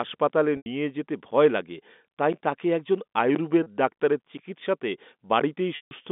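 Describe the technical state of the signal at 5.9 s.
A held, buzzy tone fades into silence from 5.76 to 5.91 s. This is packet loss with pitch repetition: about 150 ms went missing, bridged by repeating the last pitch period.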